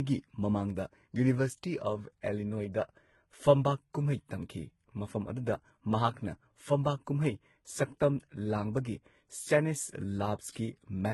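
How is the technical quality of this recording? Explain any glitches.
The technical quality is compromised throughout. The speech likely suffered transcoding between lossy codecs. Nothing remains above about 11.8 kHz. The sound points to a low-rate HE-AAC pass followed by Vorbis. Each stage re-encoded the previous one's damage, so the different artefacts are heard together.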